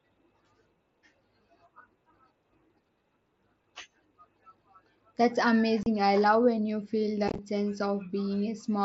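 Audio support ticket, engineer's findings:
Unconcealed Bluetooth headset packet loss on the mSBC wideband link: hard-edged silent holes at 5.83 s (30 ms) and 7.28–7.39 s (chopped crackle). No fill or fade, unlike concealed loss.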